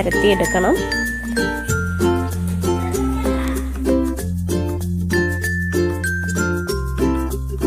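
Listening closely to the sound turned up nothing that stood out as a technical problem at any point.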